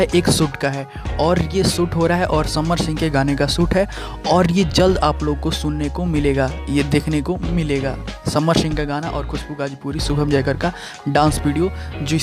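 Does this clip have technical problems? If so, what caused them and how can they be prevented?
Yes. At 4.70 to 4.74 s there is a jumbled flicker, caused by chunks out of order. One 20 ms chunk arrived one chunk late and played after its successor, leaving three hard joins. Buffering and reordering chunks by sequence number before playback prevents it.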